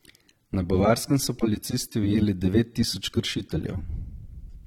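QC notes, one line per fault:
Throughout: AAC compression. The speech carries plainly audible codec damage, a smeared, swirly texture on the voice, and the top of the spectrum stops dead, with nothing above 18 kHz. The likely cause is AAC-LC coding at a low bitrate, which fits roughly 32 kbps. With so few bits per frame, the encoder quantises the frequency lines coarsely against its hearing model, so fine detail is lost and the highest band is discarded outright.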